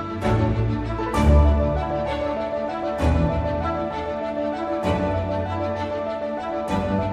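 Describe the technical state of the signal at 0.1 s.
At 0.1 s the signal is intact, with no audible dropout, clipping, distortion or other fault.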